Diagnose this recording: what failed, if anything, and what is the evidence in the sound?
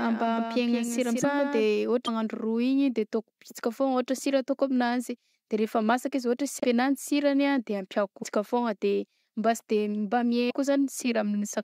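A doubled audio track runs from the start of the clip to 1.65 s. A full-band copy sits roughly 150 ms behind and about 5 dB down, with no decay or room colour. It cuts off abruptly at 1.65 s. The likely cause is a second, slower capture or routing path feeding the same mix.

The codec stage shows a broken MP3 bit reservoir at 1.22, 2.05, 6.60, 8.22 and 10.49 s. Each event is a short disturbance of 24 to 46 ms, about one or two 26.1 ms frames, where the audio skips forward. The likely cause is frames dropped from the stream, so the frames that follow rebuild from the wrong reservoir bytes.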